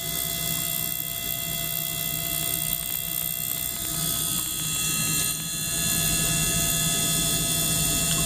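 From 2.19 to 5.41 s, a train of clicks: about thirty same-shaped pops, unevenly spaced at 8.1 per second, likely interference, unlike random, varied crackle.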